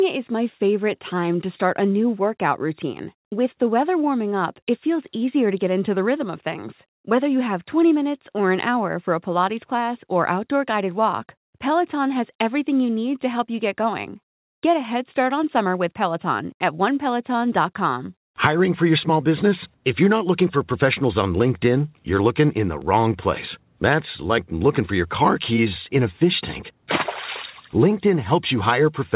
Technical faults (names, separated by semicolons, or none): none